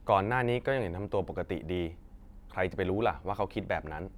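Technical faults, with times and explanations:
No technical fault can be heard anywhere in the recording.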